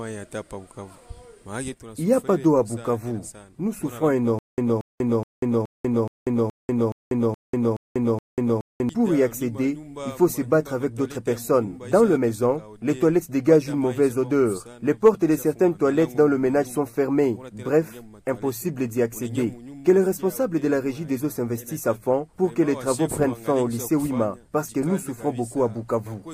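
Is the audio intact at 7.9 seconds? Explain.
No. At 7.9 s the sound is inside a stutter with silent gaps (4.39–8.89 s): a 231 ms fragment repeats every 422 ms with digital silence between, likely from a stalled stream.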